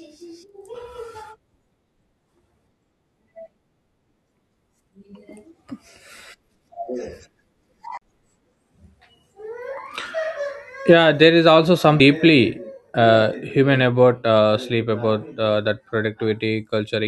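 Speech with two CD skips. From 7.97 to 8.02 s the playback mutes for roughly 40 ms and resumes from a different point. At 11.99 s, after "yeah there is also", a tick and a near-instant jump. Each time the laser lost its track and landed on another turn of the disc's spiral.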